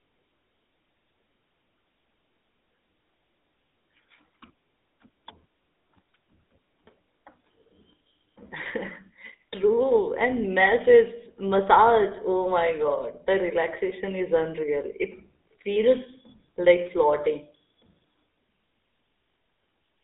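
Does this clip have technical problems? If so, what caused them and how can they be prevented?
Yes. There are three kinds of fault.

GSM full-rate codec, throughout: The speech has the buzzy, gravelly roughness of the original GSM codec. It rebuilds the voice from a vocal-tract model driven by a coarse, regularly spaced pulse excitation. This fits 13 kbps GSM full rate. The band runs only from about 250 Hz to 3.7 kHz, so the top of the voice is gone, and the damage is plainly audible. Prevention: record directly or use a wideband codec such as AMR-WB or Opus instead of a GSM call path.

Lost GSM frames, at 2.34 s, 8.68 s and 15.74 s: Each is a gap of about 20 ms, the length of a single GSM frame. When a frame arrives corrupted, the decoder reuses the parameters of the last good frame. Because these losses are so short, the result is a brief metallic ring rather than a fade to silence. Prevention: improve the radio link or add stronger error protection so that corrupted frames are rare.

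Time-stretched section, from 18.26 s to the end: The last stretch of speech suddenly runs at about 1.8 times the normal pace while the pitch stays the same. It sounds rushed because short pieces are being dropped to compress the timing. This is likely editing or software that squeezed the ending to fit a fixed duration. Prevention: trim or re-edit the content to fit the slot rather than speeding it up.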